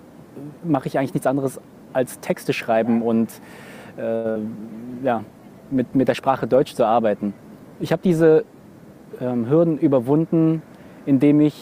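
At 4.15 s there's a short stall from a late packet: the jitter buffer ran dry, so the receiver held the last bit of sound for about 88 ms until the packet turned up at 4.28 s. Nothing's lost, but that moment drags with a faint buzzy hold, and everything after sits slightly later.

Right after, from 4.31 to 4.37 s, comes a short concealed packet loss. About 40 ms never arrived, and the decoder papered over it by extending the preceding sound and blending back in. You hear it as a quick smear or little wobble.

Then from 4.79 s to 8.73 s there's a call bitrate drop. The sound goes coarser and duller, with the top end shaved off. That fits the encoder being squeezed from about 96 kbps down to 28 kbps, sitting at the bottom for nearly 3.9 s before recovering.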